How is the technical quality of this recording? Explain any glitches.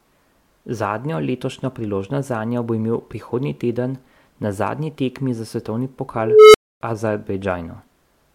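One glitch stands out: an unstable filter fault starting at about 6.16 s, right after "zadnji tekmi za svetovni", and lasting until 6.81 s. A recursive filter stage has gone unstable, so its output feeds back and grows without bound. A tone of roughly 400 Hz swells over about 380 ms into a loud, clipped squeal, then the arithmetic overflows and the output drops out for about 270 ms until the filter resets and the speech returns.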